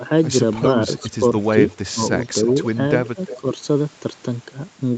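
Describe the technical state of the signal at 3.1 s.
At 3.1 s an echo leak runs from 3.05 to 3.37 s: a faint copy of the speech returns about 358 ms late, roughly 15 dB down, likely from incomplete echo cancellation. Overlapping it, from 3.13 to 3.47 s, speech is suppressed in double talk, likely by the canceller attenuating both sides, with dips of up to around 15 dB over about 150 ms.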